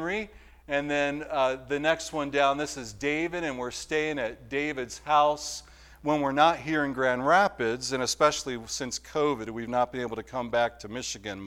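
From about 2.84 to 6.04 s there's a mains buzz sitting under the sound, roughly 35 dB below it. It's that steady, raspy edge you get when something like a dimmer, a rectifier or a missing shield lets sharp switching spikes into the chain. They land twice per 50 Hz cycle, so the buzz repeats at 100 Hz, and its harmonics stretch up into several kHz. That's why it sounds gritty rather than like a smooth hum.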